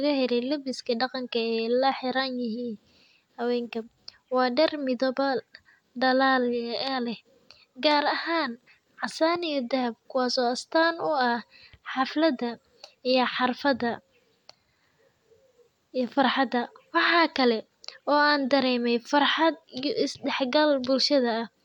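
No technical faults are audible anywhere in the recording.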